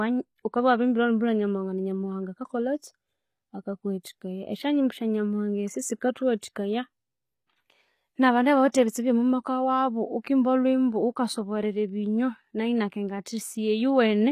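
HE-AAC compression runs throughout this speech clip, with plainly audible damage and nothing above 15 kHz. The treble sounds bright but synthetic, likely from spectral band replication rebuilding the upper band from copied lower bands, which fits a low bitrate around 24 kbps.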